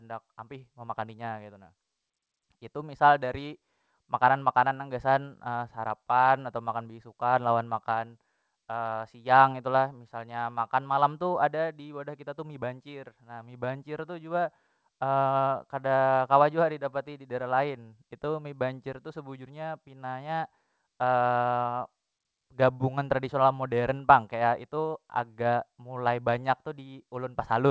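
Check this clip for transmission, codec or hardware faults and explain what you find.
No transmission, codec or hardware faults found; the speech has carried over a call path with nothing above 8 kHz, which fits a wideband codec such as G.722 at 64 kbps working as designed.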